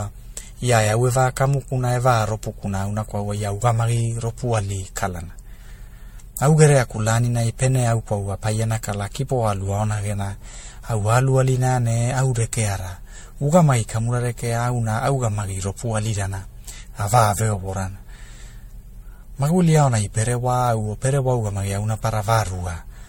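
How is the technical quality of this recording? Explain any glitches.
The recording is degraded by generation loss for its whole length. The speech sounds swirly, smeared and hollow, with blurred consonant attacks and no content above 16.5 kHz. That fits MP3 at about 64 kbit/s, likely re-encoded around seven times, with quantisation errors and spectral holes accumulating across shifted frame grids.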